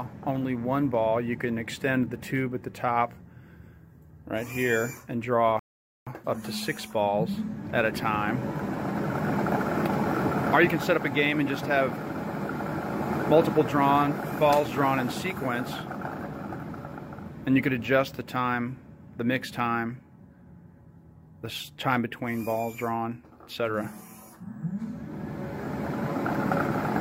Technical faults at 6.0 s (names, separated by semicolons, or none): rebuffering stall